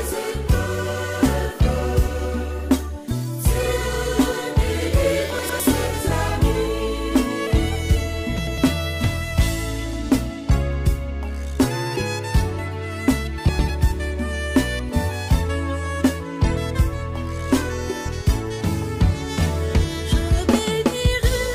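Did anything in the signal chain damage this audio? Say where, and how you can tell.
Yes. Frames out of order, at the network stage feeding the decoder: two neighbouring 104.5 ms blocks were decoded swapped at 5.39–5.60 s, 8.37–8.58 s and 13.49–13.70 s. Each stretch plays its halves exchanged, a garbled flutter, without losing time.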